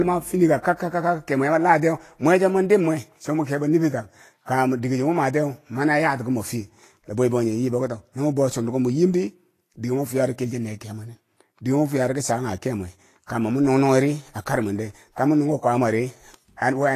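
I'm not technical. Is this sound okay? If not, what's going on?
No. The speech was most likely squeezed hard by Vorbis compression, a method that shrinks audio files by keeping only a rough outline of the high, bright sounds and throwing away the fine detail. Here nothing above about 14.2 kHz survives, and the remaining treble is so coarse that its detail turns into a fizzy noise. The result is a clearly hissy, grainy voice, with a rough tone and softened starts to sounds.

The same process also causes pre-echo. The compression works on short chunks of sound at a time and spreads its noise evenly across each chunk, so when a sudden sound lands late in a chunk, that noise leaks into the quiet moment just before it. You hear a brief hiss ahead of the sound, which then starts smeared rather than crisp. It happens at 4.46 to 4.48 seconds, between "mwi kebo niffir tak" and "dike cho", at 13.26 to 13.29 seconds, and at 16.57 to 16.62 seconds.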